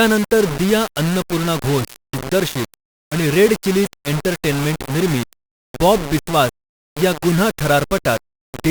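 Throughout the speech, the samples were likely rounded to just 4 bits without dither, a low bit depth. The error tracks the signal, leaving grainy distortion only about 10 dB below it that shifts with the speech, while the quietest passages sputter or drop to silence.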